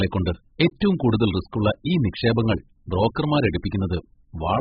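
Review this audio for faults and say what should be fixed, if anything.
The speech was likely squeezed through AAC compression at a very low bitrate, around 8 kbps, throughout. The encoder discards everything above 5.1 kHz and coarsely quantises what remains, so the sound is dull, smeared and warbly, with fizzy sibilants. Encoding at a much higher bitrate from the original source would prevent this.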